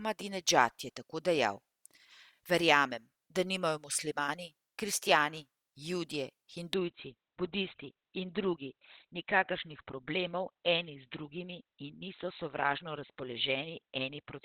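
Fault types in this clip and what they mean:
Adaptive stream at a lower bitrate: Right after "nimajo muslimani kristjani judje", at about 6.74 s, the stream drops to a lower-quality version for the rest of the clip with no gap. Nothing sounds above 4.2 kHz, which fits a switch from Opus at 64 kbit/s down to 12 kbit/s.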